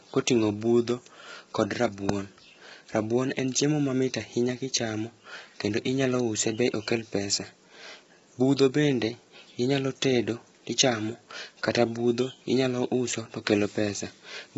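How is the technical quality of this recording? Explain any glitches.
The technical quality is poor: the speech carries heavy low-delay AAC compression damage for the whole clip.

Low-delay AAC compression: from start to finish the voice sounds rough and grainy, with a noisy haze filling the gaps between pitch harmonics and nothing above 7.8 kHz. The likely cause is AAC-ELD, the video-call codec, whose short frames separate harmonics poorly and spend bits inefficiently. Damage this heavy points to a bitrate around 16 kbps, too little to keep the voice clean.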